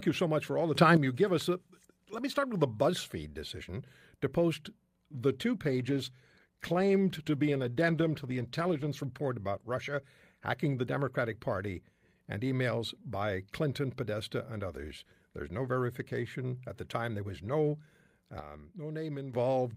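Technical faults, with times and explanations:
0.75–0.97 s, sudden gain jump: after "much for all the", the speech and the background noise leap up together by about 9 dB, with an abrupt edge rather than a swell, and settle back before "you give us". The likely cause is a digital gain setting applied between one sample and the next with no ramp, so the level steps instantly instead of gliding.
5.65–8.95 s, call bitrate drop: from "to post the two" the speech turns rough and watery, its crisp upper range dulled, until clarity returns around "report about". The call's bandwidth estimate fell and the encoder was pushed from 48 to 16 kbps, sitting at that floor for about 3.2 s. At so few bits the codec quantises coarsely and trims the high frequencies, which produces the muffled, smeared texture.
18.40–19.34 s, sudden gain jump: near the end the speech and its noise floor drop together by about 9 dB in a single step, with no fade, and recover just as abruptly. 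This is likely a gain change or bit shift applied without a ramp. Because the whole signal moves at once, voice and background keep their balance while the overall loudness jumps.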